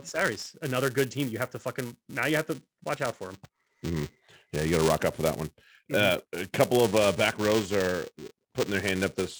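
Speech runs through the whole clip with buffer tearing from start to finish. A robotic buzz rides on the sound at about 345 Hz, which fits a 128-sample buffer. The writing program and the playback hardware have drifted out of step. They cross inside every buffer period. A small sliver of each buffer holds audio from one lap earlier, roughly 5 ms old. Hard joins at both edges create the rattle. It sounds only while speech is present.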